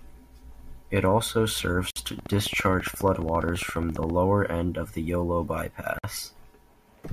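At 1.91 s and again at 5.98 s, the speech drops out for about 57 ms and 52 ms. These are gaps at joins of encoded pieces, where encoder delay and end padding were left in. From 2.19 to 4.11 s, a regular train of clicks ticks through, about thirty at 14.7 per second, peaking about 5 dB above the speech. It ends just before "end of the", likely from electrical interference.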